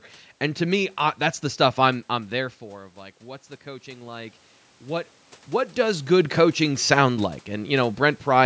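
From 3.19 to 5.14 s, automatic gain rising: the input level fell by about 15 dB, and the gain control slowly added about 5 dB to compensate. The voice and room noise swell together over nearly two seconds, leading into "what does good coaching".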